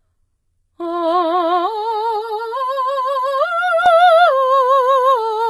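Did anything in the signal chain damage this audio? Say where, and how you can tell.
Yes. Throughout the music, the treble sounds gritty and metallic, with nothing above 11.8 kHz. This is likely HE-AAC compression at the codec stage, consistent with a very low bitrate near 16 kbps. Spectral band replication synthesises the upper bands from copied lower ones. A spectrogram would show a hard ceiling and smeared, repetitive high-frequency texture.

From 2.16 to 3.86 s the sound turns hollow and phasey. That points to channel delay (comb filtering) in the driver or buffer stage: one channel arrives roughly 5 ms late and is summed to mono. A spectrogram would show fixed notches starting around 100 Hz and repeating at even spacing.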